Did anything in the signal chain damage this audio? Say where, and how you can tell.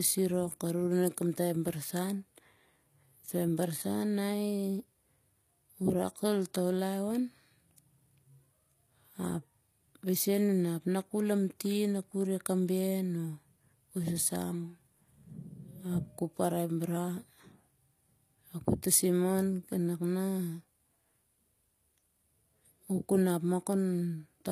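Yes, the damage is at the codec stage and runs through the whole clip. The treble sounds synthetic rather than recorded: s sounds come out gritty and lispy, with a metallic sheen, and nothing survives above 15 kHz. That points to likely HE-AAC compression, which codes only the lower spectrum and rebuilds the top by copying lower bands upward under a coarse envelope. The artefacts are plain enough to fit a low bitrate of around 24 kbps.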